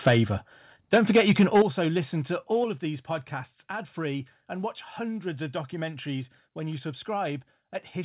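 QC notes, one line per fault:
0.06–0.19 s and 0.93–1.62 s, microphone overload: the input gain was likely set too high, driving the peaks about 6 dB and then about 7 dB past the converter's ceiling, with around 7 percent of samples flattened. The clipped tops add a harsh, crackling edge to the loudest syllables. The second burst runs up to just before "listen to". Through the narrow telephone band, with nothing above 4 kHz, the grit sits in the mids.
0.08 s, 1.62 s and 2.64 s, microphone volume stepped down: the input level was likely cut in single jumps, reacting to a microphone that was too loud or clipping, by about 3 dB, about 9 dB and then about 5 dB. The sound and the background drop together at once rather than fading, so each step reads as an abrupt loss of level. The deepest cut lands right after the second distorted stretch, just before "listen to". The last falls between "listen to" and "of these podcasts ad".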